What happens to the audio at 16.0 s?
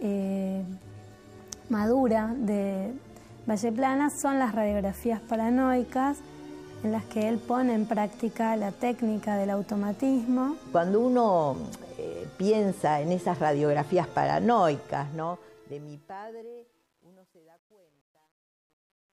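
Truncation distortion on a fade runs from 14.78 s to 19.13 s. Undithered rounding, which fits a 10-bit stage, turns the quiet waveform into steps, so from 16.1 s the tail turns gritty. Gate chatter would instead switch on and off cleanly.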